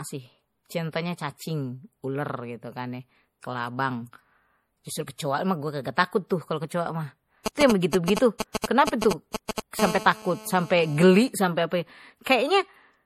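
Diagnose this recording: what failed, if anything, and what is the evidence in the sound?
The speech has a dull, swirly, smeared quality throughout, with nothing above 16.4 kHz and two different kinds of artefact layered together. At the codec stage this is likely transcoding between lossy codecs: a low-rate MP3 around 48 kbit/s re-encoded to AAC-LC around 64 kbit/s.

From 7.46 to 9.60 s, galloping dit-dit-dit groups of short buzzes at 216.7 Hz sit about as loud as the speech. These are GSM signalling bursts in the analogue wiring: a nearby 2G phone's radio bursts are being rectified by the audio circuit.

From 9.79 to 11.04 s a hard, raspy, steady buzz at 216.7 Hz with dense harmonics runs at about 11 dB below the speech, unrelated to it. This is GSM phone buzz, again in the analogue wiring: the phone is now transmitting continuously in a call, and its 217-per-second bursts are rectified into the audio.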